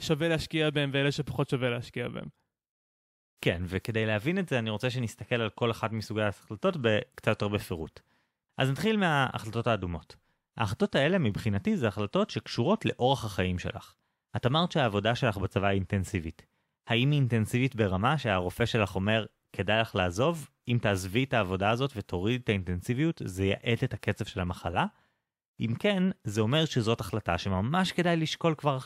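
No technical faults can be heard anywhere in this speech recording. There is nothing to place on the timeline.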